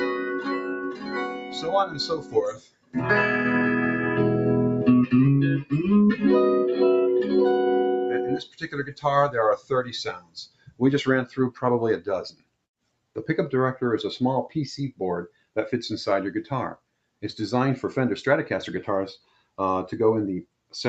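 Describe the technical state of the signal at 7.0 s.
At 7.0 s, as throughout, a noise suppressor applied to music or sounds is at work. It mistakes sustained tones and tails for noise and pulls them down by around 10 dB after each attack, so the level pumps. The waveform shows onsets dropping into shrunken tails, and the spectrogram shows held partials fading patchily.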